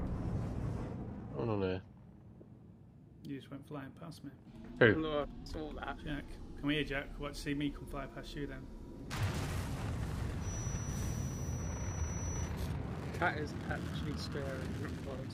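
A feedback whistle runs behind the audio from 10.37 to 12.54 s: a thin tone held at 5.9 kHz, roughly 15 dB below the signal, swelling and fading slowly in level. It is likely a loudspeaker-to-microphone loop sitting just short of a full howl.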